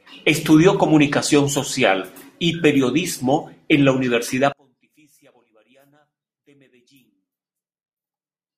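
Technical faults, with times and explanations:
4.53 s to 8.58 s, one channel inverted: from 4.53 s to the end the speech collapses by about 37 dB when heard in mono, leaving only a faint trace rather than silence. The likely cause is one stereo channel with reversed polarity, so the centred voice and low end cancel when the channels are summed and only their small difference survives. A dropout or mute would go fully silent, and here the residue persists.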